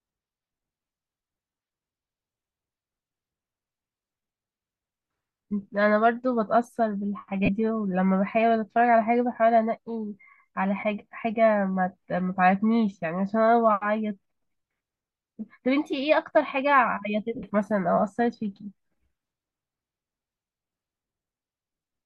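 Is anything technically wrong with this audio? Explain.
Yes. The speech has lost LE Audio frames at three points: 7.45 to 7.49 s and 10.80 to 10.83 s, each a 30 ms gap, and 17.35 to 17.44 s, where about 67.5 ms is lost across 75 ms, mostly in one run of around 70 ms. When frames are missing, the LC3 decoder fills in by repeating the last spectrum with randomised phase signs. Voiced sound turns into a brief noisy smear, and the longer third dropout fades toward silence. The light lossy compression on the clip is not a fault here.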